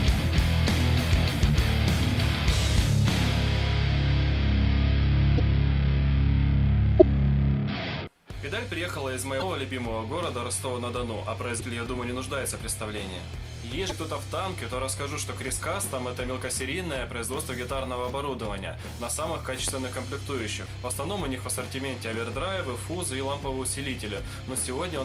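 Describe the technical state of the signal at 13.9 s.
A broken MP3 bit reservoir is the likely cause of the disturbance from 13.89 to 13.92 s. The sound jumps ahead and a brief chirp, burst of noise or short hole replaces it, lasting about one 26.1 ms frame. After a cut, that frame looks back into the reservoir and decodes bytes belonging to a different frame.

Sample clock jitter is also present at this moment. The converter clock wanders by less than a microsecond, so samples land slightly early or late. That error sits about 45 dB below the signal and is heard as a faint roughness that grows on loud and bright passages.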